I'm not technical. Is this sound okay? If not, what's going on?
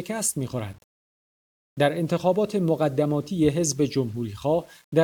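No. The speech sounds grainy throughout, a roughness that comes and goes with it rather than a steady hiss. This is likely low bit depth without dither, around 8 bits.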